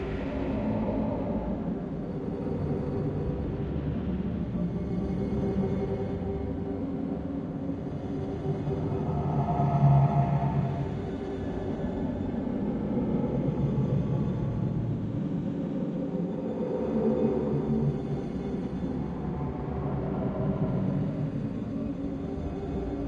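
No faults can be heard anywhere in the recording; the audio runs without any dropout, glitch, distortion or other playback error.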